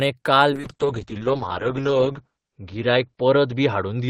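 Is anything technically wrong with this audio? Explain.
Yes. From 0.55 s onward there's a call bitrate drop: the encoder gets starved of bits, so the speech turns rough and watery, with everything above 8 kHz gone.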